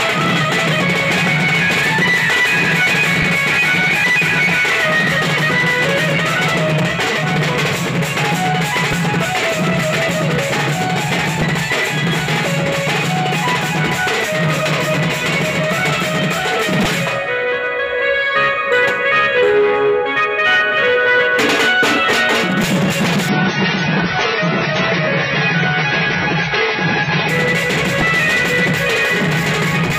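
From 23.29 to 27.29 s the audio abruptly loses everything above 6.5 kHz and gains codec artefacts, without any gap: an adaptive stream at a lower bitrate, consistent with a step from about 96 to 16 kbit/s.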